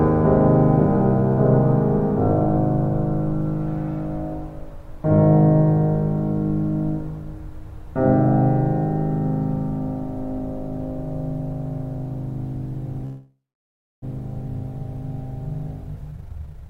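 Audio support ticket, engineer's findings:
Call audio freeze, 13.05–14.04 s: music stalls, last sound extended as fading buzz or hiss, then about 0.64 s silence. Resumes where it stopped, nothing lost. Likely delayed packets draining the jitter buffer.

Jitter buffer speed-up, 16.11–16.69 s: music runs at about double speed, same pitch, tempo rushed. Receiver trimming pitch-period chunks, roughly half a second cut, to reduce accumulated delay.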